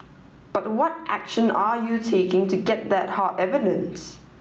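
Throughout the speech, the level swings around 10 dB: gain pumping, likely from excessive input gain feeding a fast limiter. The call codec's top end stops near 8 kHz.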